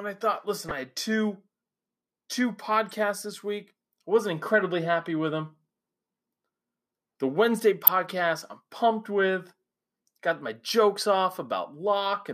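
Three short corrupt frames were decoded and played: 0.69–0.72 s, between "I thought listen" and "I had two", a moderate glitch; 2.89–2.94 s, just before "this week I wasn't", a faint glitch spanning a few frames; and 7.87–7.90 s, the loudest glitch of the three. In each, flipped bits misdirected energy across the spectrum.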